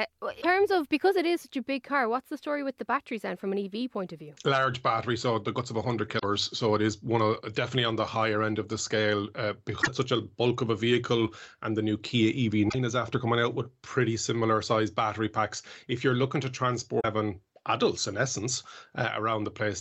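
Short bursts of damaged data in a compressed stream break up the speech at 0.38, 6.15, 9.78, 12.66 and 16.97 s. Each lasts under a tenth of a second. Corrupted bytes make the decoder misread frames and lose sync. Each is heard as a brief chirp, squawk, click or short hole.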